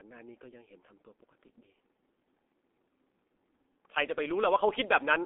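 Throughout, a heavily working G.723.1 codec, which fits about 6.3 kbit/s, cuts everything above 3.8 kHz, so the speech sounds muffled and hoarse with blurred consonants.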